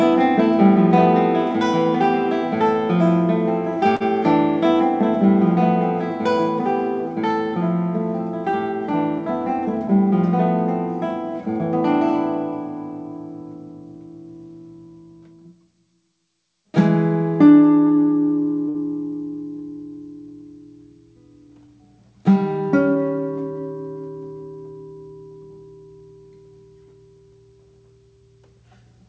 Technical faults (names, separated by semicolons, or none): short stall from a late packet